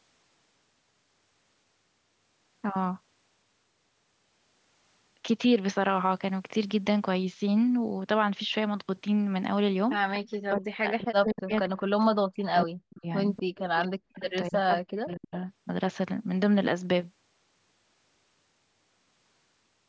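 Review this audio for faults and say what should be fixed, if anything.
Echo leak at 10.14–10.19, 13.36–13.60 and 14.25–14.31 s: a faint copy of the speech returns 243 ms late, roughly 15 to 20 dB down, likely from a loudspeaker echo canceller that failed to remove it. Improving the far end's echo cancellation, or having that side use a headset, would prevent it.

Speech suppressed in double talk at 10.45–13.05, 13.81–14.24 and 14.48–15.35 s: the talker's level drops by as much as around 40 dB while both sides speak, likely because the canceller turned everything down. Tuning the echo canceller's double-talk detection so it keeps near-end speech during overlap would prevent it.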